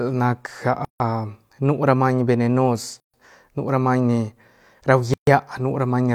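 Gaps at a join of encoded pieces cut the speech at 0.85 to 1.00 s, 3.00 to 3.14 s before "nu ra", and 5.14 to 5.27 s, each about 140 to 150 ms, every 2 s. Separately encoded pieces keep their start delay and end padding, leaving abrupt, smeared full-band blank columns on a spectrogram.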